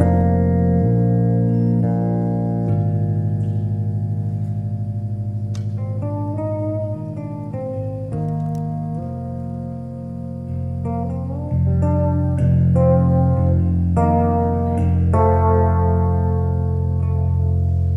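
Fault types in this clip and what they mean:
Adaptive stream at a lower bitrate: from 0.86 to 2.86 s a slowed connection swaps in a leaner stream, likely 48 kbit/s MP3. Codec artefacts rise abruptly and the waveform shows no gap.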